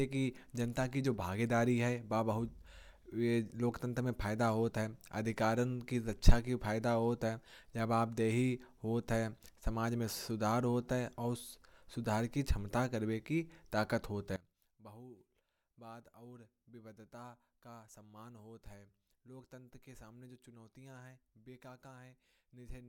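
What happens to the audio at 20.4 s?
At 20.4 s the speech sits inside a collapse that runs from 14.36 s to the end: it drops by about 19 dB and turns faint. The likely cause is one channel inverted, so the centred voice cancels when summed. Unlike a simple gain drop, what both channels share vanishes, leaving only a faint copy of the mismatch between them.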